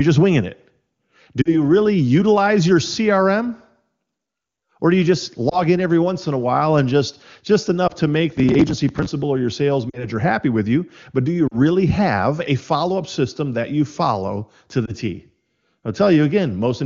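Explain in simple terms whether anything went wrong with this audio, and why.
A couple of things went wrong. First, lost AMR speech frames: radio errors spoiled small chunks of the call, and the phone papered over each gap by stretching the last good sound while fading it. Listen for brief warbles or dips at 1.41–1.55 s, 5.49–5.61 s (between "do you just" and "in every once in"), 7.87–7.92 s, 9.89–10.06 s, 11.48–11.58 s, and 14.85–14.94 s (after "that you follow to").

Second, processor overload crackle from 8.30 to 9.11 s, just before "or your sales." The device got too busy to deliver its tiny audio chunks on time. It dropped dozens of them, probably a few milliseconds each, and those skips pile up into a gritty tearing sound.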